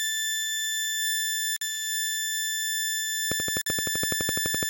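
A hard-edged 50 ms hole cuts the music at 1.56 to 1.61 s, and again at 3.61 to 3.66 s. These are gaps between chunks: silence inserted at joins that fits 2-second chunks. From 3.32 s to the end, a steady ticking at 11.9 clicks per second rides well above the music. This train of clicks likely comes from interference or a struggling interface.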